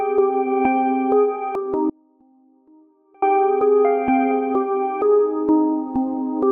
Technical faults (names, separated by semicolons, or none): damaged data in a compressed stream; audio dropout to a faint residue